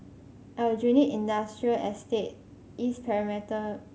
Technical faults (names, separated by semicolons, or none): none